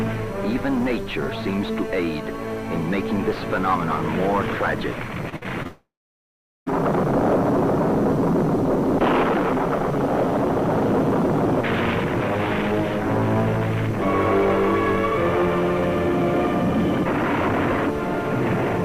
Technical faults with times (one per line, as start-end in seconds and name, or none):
5.29-5.67 repeated packet loss (robotic sound)
5.67-6.68 long network dropout